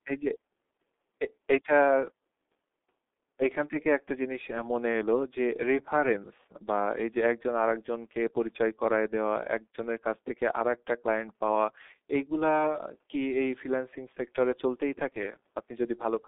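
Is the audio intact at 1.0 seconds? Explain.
No. At 1.0 seconds the speech is already passing through G.723.1 coding, which runs the whole clip and fits a bitrate around 6 kbit/s. Nothing reaches above about 3.8 kHz, giving a muffled sound. Unlike simple telephone band-limiting, the coarse 30 ms frames also leave a hoarse texture and smeared consonants.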